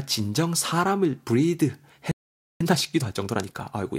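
At 2.11 s the speech stops dead and stays silent until 2.61 s, a gap of about 490 ms. This is a playback stall, likely caused by the player running short of data or being blocked.

From 2.61 s to 3.99 s the speech runs about 1.25 times faster as time-compressed catch-up clears the backlog, cutting and cross-fading small slices. The pitch stays natural, which sets it apart from a simple speed-up.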